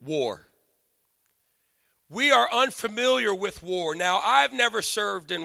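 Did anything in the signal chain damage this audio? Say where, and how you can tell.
No, nothing in the chain from capture to playback left an audible mark on this speech.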